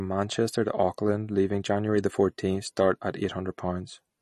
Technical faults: MP3 compression

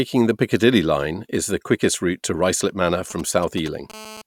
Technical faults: GSM signalling bursts; GSM phone buzz

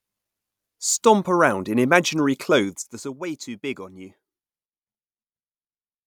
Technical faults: zipper noise

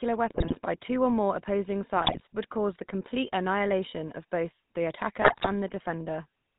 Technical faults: GSM full-rate codec; GSM bit errors

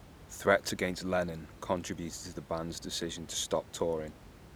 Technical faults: none

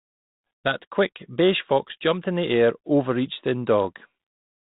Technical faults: none

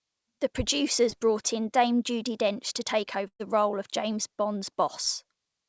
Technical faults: short concealed packet loss; burst of packet loss

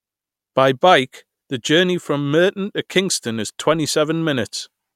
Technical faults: none

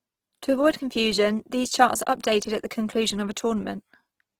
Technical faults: Opus compression

